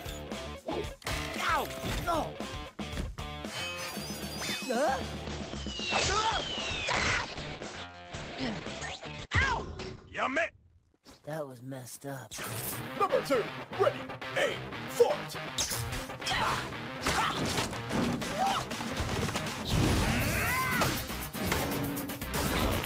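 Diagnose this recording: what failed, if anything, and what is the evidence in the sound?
A call bitrate drop in the network and codec stage runs from 5.26 to 14.27 s. The top is cut from 20 kHz to 8 kHz and the sound turns coarse, consistent with falling from 64 to 9 kbps. Unlike packet loss, nothing drops out.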